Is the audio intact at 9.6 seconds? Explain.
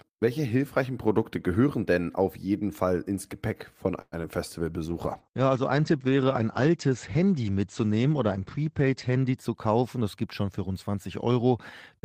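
No. A jitter buffer speed-up runs from 9.09 to 10.28 s: repeated pitch-period cuts, totalling about a tenth of a second, play the speech hurried at 107% speed with unchanged pitch. On a spectrogram, the harmonic spacing stays the same while syllables are squeezed closer together in time.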